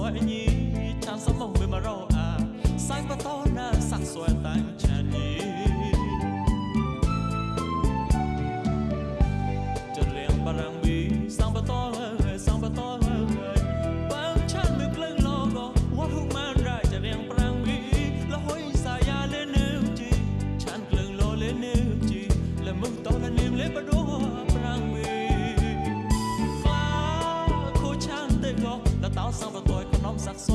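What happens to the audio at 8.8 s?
Nothing goes wrong at 8.8 s: the audio runs through that moment intact, with no break, click or distortion.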